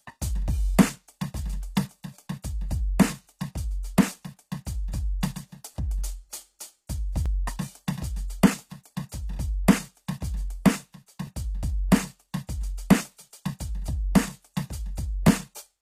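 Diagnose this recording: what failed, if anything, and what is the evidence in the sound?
Codec stage, throughout: the music carries HE-AAC compression damage. The treble sounds bright but gritty and metallic, and nothing is present above 14.9 kHz. That points to a low bitrate, around 24 kbps. It is likely HE-AAC's band replication rather than a simple low-pass, because the top octave is present but is synthesised and not the original.

Buffer or transport stage: overlapping chunks produce a brief stutter at 3.24, 7.26, 11.27 and 15.28 s. At each join about 13 ms of audio plays twice, and the joins repeat every 4 s. Because the material is doubled rather than missing, this is chunk overlap and not a dropout.

Codec stage: pre-echo puts a short hiss ahead of sharp attacks at 3.83, 5.21 and 8.84 s. The attacks sound softened, with the noise spread 14 to 19 ms before each one. These events follow the attacks rather than the 4 s chunk spacing, and they add hiss without repeating any audio, which separates them from the chunk stutters.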